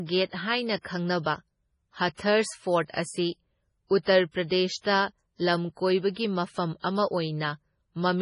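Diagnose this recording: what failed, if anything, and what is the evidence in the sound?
The codec stage is where this one went wrong, and it runs the whole way through the speech. Everything above about 10.5 kHz is simply gone, a hard treble shelf, and the damage is heavy: s sounds get that swirly, watery quality, consonant attacks smear, and faint detail flickers in and out between frames. That's the signature of likely MP3 compression starved of bits, consistent with something as low as 24 kbps, where the encoder trims the top and zeroes the weak frequency lines.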